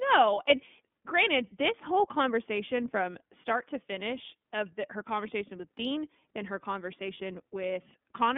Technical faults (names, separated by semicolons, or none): iLBC codec